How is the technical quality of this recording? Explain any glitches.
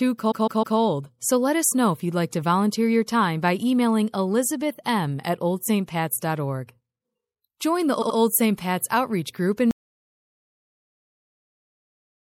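The recording has clear technical problems. Coding damage runs through the whole clip, two stutters occur, and the sound drops out completely near the end.

MP3 compression is audible throughout. The speech sounds watery and swirly, with metallic chirps on s sounds and smeared onsets. The likely cause is a low bitrate, around 64 kbps. At that rate the encoder cuts the treble and lets weak frequency detail flicker between frames.

Repeated frames cause stutters at 0.30 to 0.77 s and 8.01 to 8.17 s. In the first, a block of about 157 ms plays three extra times. In the second, a 78 ms block repeats twice. Together the repeats add about 0.63 s.

An audio dropout to silence begins at 9.71 s and lasts to the end. The sound cuts off mid-flow into silence, with no room tone at all. The likely cause is a lost input, while recording continued writing silence.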